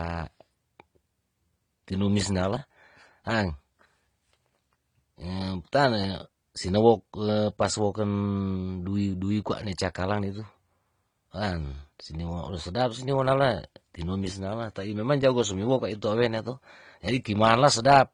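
The speech was likely passed through two lossy codecs in turn: transcoding between lossy codecs, with a low-rate AAC-LC stage around 32 kbit/s followed by an HE-AAC encode near 48 kbit/s. Throughout the clip the second encoder spends bits re-coding the first one's artefacts and adds its own spectral-replication texture, so both kinds of artefact are heard together, with content reaching up to about 20.3 kHz and nothing above that.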